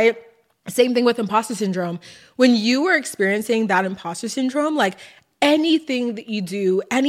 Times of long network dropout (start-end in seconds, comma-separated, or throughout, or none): none